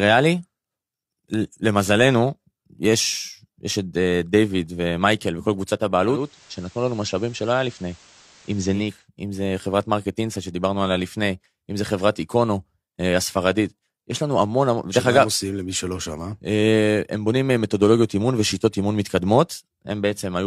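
From 6.04 to 9.09 s, digital radio blending to analogue: the receiver lost its digital stream and faded over 0.4 s to FM, then back. Level shifts about 1 dB, and faint hiss appears, unlike a plain codec bandwidth drop.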